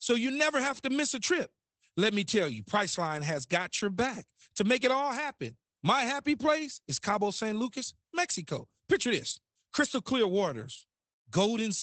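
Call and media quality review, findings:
Muffled, hoarse speech throughout, plainly audible coding damage, nothing above 8.6 kHz. Opus voice compression, SILK wideband: band cut near 8 kHz, coarse excitation, fits a 12 kbps stream.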